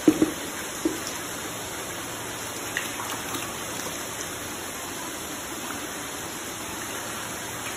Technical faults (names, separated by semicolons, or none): MP2 compression